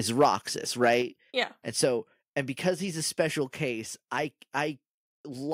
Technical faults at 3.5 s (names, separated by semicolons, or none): microphone volume stepped down